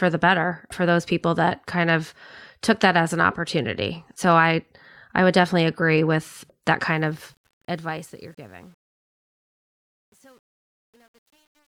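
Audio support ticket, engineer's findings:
Truncation distortion on the fade-out, 6.86 s to clip end, after "definitely agree with that". The tail turns gritty, worst from 7.98 s onward, which fits an undithered volume stage holding about 9 bits. Unlike gate chatter, the grit tracks the falling level, not the speech envelope.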